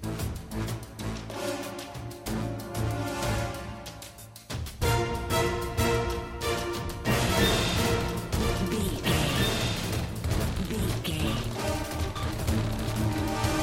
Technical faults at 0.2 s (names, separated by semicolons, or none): none